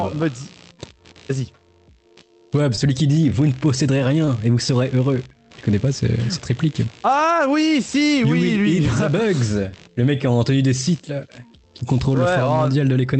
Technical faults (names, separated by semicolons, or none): computer activity noise; short concealed packet loss